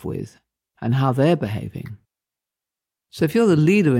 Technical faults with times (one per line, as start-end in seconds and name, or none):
none